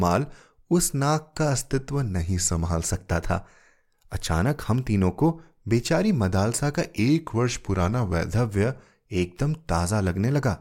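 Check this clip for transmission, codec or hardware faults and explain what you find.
Two faults of the same kind are audible. From 2.19 to 2.85 s and again from 6.98 to 8.33 s, the speech slows by 6.25% and drops 112 cents, about a semitone, then snaps back. This is likely a drift correction step, where clock-matching software briefly lowered the playback rate to rebalance its buffer.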